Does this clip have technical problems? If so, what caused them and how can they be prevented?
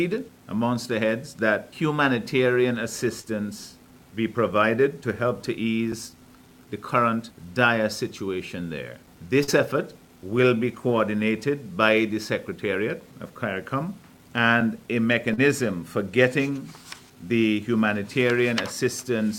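Yes. Short concealed packet loss at 3.21–3.25, 9.43–9.50 and 15.34–15.39 s: 20–40 ms of audio arrived too late, and the decoder filled each gap by extending the preceding sound, leaving brief smears. A steadier network path, a deeper jitter buffer and forward error correction would let those packets arrive or be rebuilt in time.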